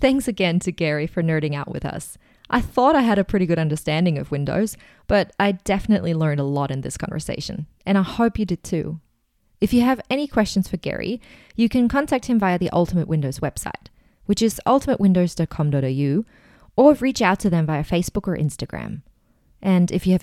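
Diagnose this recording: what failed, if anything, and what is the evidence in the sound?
No faults detected anywhere.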